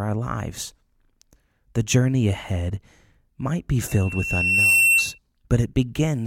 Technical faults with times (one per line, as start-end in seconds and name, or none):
3.88-5.18 loudspeaker feedback squeal